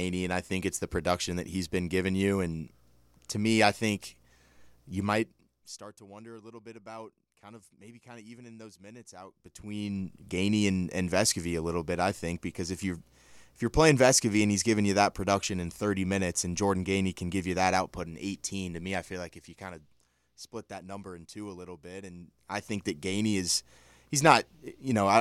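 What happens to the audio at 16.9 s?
Nothing goes wrong at 16.9 s; the speech carries on intact through that moment, with its level following smoothly rather than jumping.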